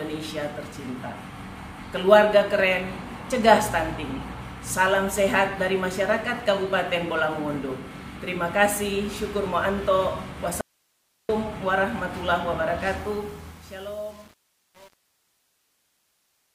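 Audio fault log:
10.61–11.29 s, audio dropout to a faint residue: the sound cuts abruptly for about 0.68 s, leaving only hiss roughly 45 dB down, likely a signal loss while the downstream path stayed live.
12.97–16.54 s, truncation distortion on a fade: the fade-out turns gritty toward its quiet end, as if the gain stage kept only about 8 bits without dither.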